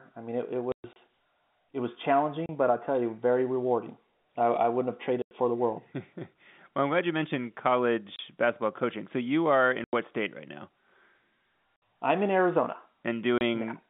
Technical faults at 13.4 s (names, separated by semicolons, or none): packet loss filled with silence